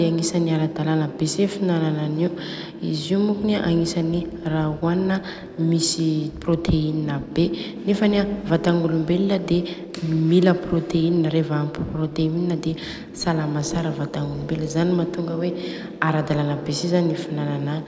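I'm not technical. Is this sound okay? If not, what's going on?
Yes, nothing stood out as a problem when listening to this recording.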